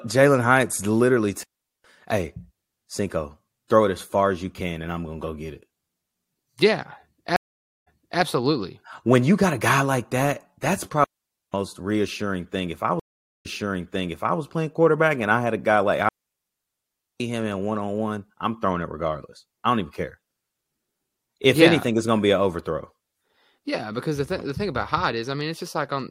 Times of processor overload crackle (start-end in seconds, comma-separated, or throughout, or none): none